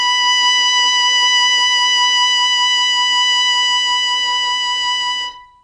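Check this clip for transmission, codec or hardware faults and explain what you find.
The clip has one fault, present for its whole length: AAC compression. The music has nothing above 9.6 kHz, and the damage is plainly audible. The likely cause is AAC-LC coding at a low bitrate, around 32 kbps. With too few bits, the encoder drops the top octave and coarsely quantises what remains. The result is a dull, band-limited sound with smeared transients and a warbling, fizzy texture on sustained tones.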